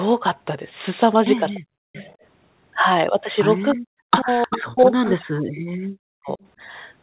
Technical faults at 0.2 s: none

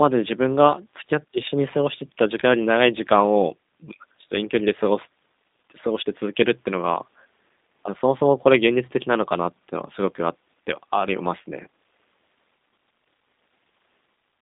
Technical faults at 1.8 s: G.729 codec

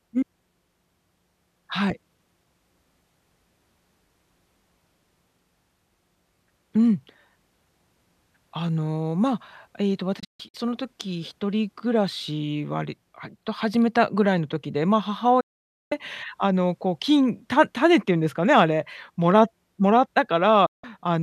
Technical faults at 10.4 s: digital broadcast dropout

